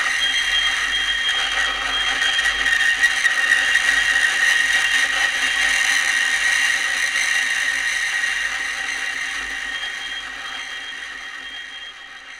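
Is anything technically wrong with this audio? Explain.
No, the signal of these sounds comes through intact and steady, with nothing technically wrong to be heard in it.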